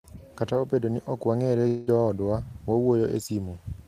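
At 1.67 s the speech gives way to a smeared, fading buzz that carries the last sound on for about 0.2 s before the audio resumes at 1.90 s with that stretch missing. This is likely a long network dropout, with the receiver filling the gap instead of playing silence.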